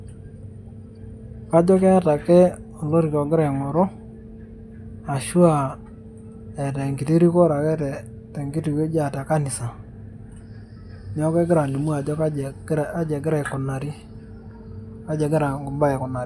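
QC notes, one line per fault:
No faults found in this speech recording. Nothing heard calls for an entry.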